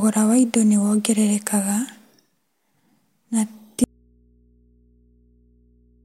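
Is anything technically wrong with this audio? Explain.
Yes. The speech suffers an audio dropout to a faint residue starting at 3.84 s, right after "na ti", and it never recovers before the clip ends. The signal vanishes abruptly and leaves only mains hum, roughly 40 dB below the speech. The likely cause is a break upstream while the input stayed live and picked up hum. On a waveform the envelope collapses to a thin band. A spectrogram shows speech harmonics ending sharply, with only low, steady hum lines continuing.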